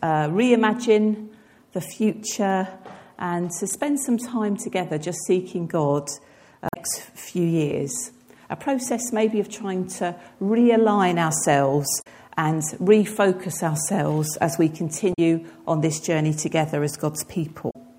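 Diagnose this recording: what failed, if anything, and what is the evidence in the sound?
The failure is at the codec stage: damaged data in a compressed stream. Brief garbled bursts of roughly 0.1 s occur at 6.66–6.77 s, 11.98–12.07 s, 15.10–15.19 s and 17.67–17.76 s. On a spectrogram each appears as a short vertical smear of broadband or blocky energy unrelated to the surrounding sound, and the waveform shows abrupt discontinuities at its edges. The decoder misreads corrupted frames, loses sync and recovers at the next valid frame header.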